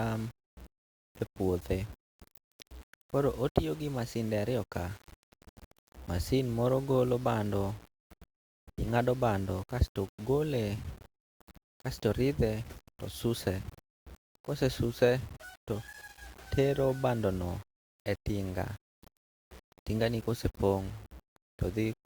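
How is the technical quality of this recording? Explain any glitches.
The quality is poor throughout the speech. The likely cause is low bit depth without dither: samples were rounded to coarse steps, consistent with about 7 bits, leaving grainy distortion that tracks the voice, roughly 25 dB below it, with quiet sounds turning gritty.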